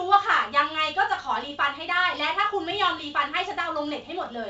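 Nothing in this speech clip stood out on listening.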